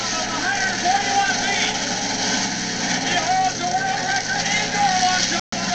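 About 5.40 s into this short stretch of audio, the sound cuts out and stays silent until about 5.54 s, a gap of roughly 0.14 s. This is a Bluetooth dropout, most likely from packets that reached the headphones too late and were discarded. When the sound returns, it is further along, as though it kept playing through the gap. That skip sets it apart from a buffer underrun, which would pause the sound and then pick it up exactly where it stopped.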